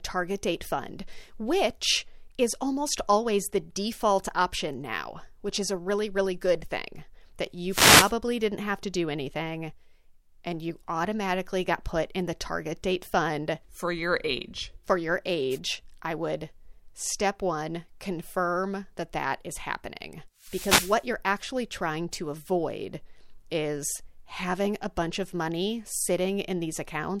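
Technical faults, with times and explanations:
7.69–8.13 s, 15.50–15.59 s and 20.38–21.09 s, wireless microphone noise hit: short bursts of static swish over the speech, after "really good thing that", just before "I would step one", and after "that that is happening". Reflections cancel the FM radio signal, so receiver noise rises over the voice for about 0.45 s, 0.09 s and 0.71 s. A spectrogram shows broadband hiss patches smearing the harmonics, and the waveform's noise floor swells.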